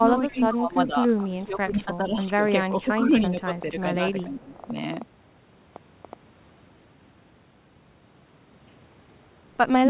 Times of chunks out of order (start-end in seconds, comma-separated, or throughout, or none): none